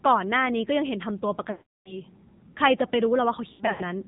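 It's a speech clip, and it's been through the AMR narrowband mobile codec the whole way: nothing above 4 kHz, with a plainly audible buzzy, synthetic edge that fits a low mode around 7.4 kbps. On top of that there are lost AMR speech frames. From 1.52 to 1.99 s about 340 ms goes missing, so the voice smears out and fades to silence before coming back rough. From 3.52 to 3.83 s shorter losses are scattered across roughly 280 ms, giving warbly dips where the decoder patches over the gaps.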